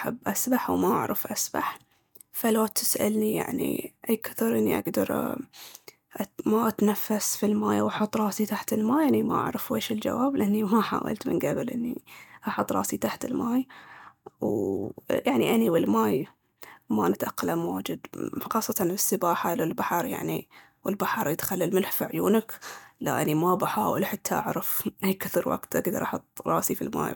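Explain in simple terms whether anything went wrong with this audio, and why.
Two brief glitches in the speech come from damaged data in a compressed stream, at 14.47 s and from 26.03 to 26.05 s. Corrupted bytes there made the decoder misread those slices and briefly lose its place, causing short blips.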